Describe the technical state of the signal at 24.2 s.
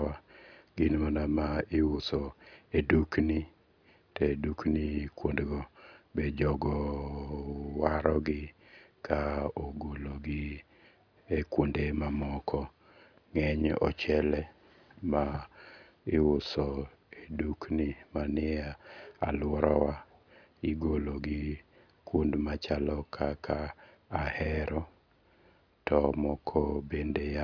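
At 24.2 s the speech signal is intact, with no audible technical fault at that moment.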